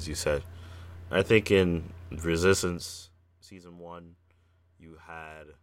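No technical faults can be heard anywhere in the speech. The level rises and falls smoothly in places, like a fader being moved, and each change is gradual rather than abrupt.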